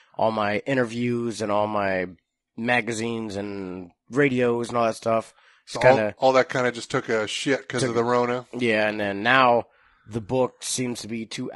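Throughout this speech clip the voice has a rough, grainy texture, with a haze of noise filling the gaps between the pitch harmonics and a thin, synthetic sheen on the upper frequencies. The likely cause is low-delay AAC compression of the kind used for video calls. Its short frames resolve harmonics coarsely, and the plainly audible damage points to a low bitrate in the region of 32 kbps.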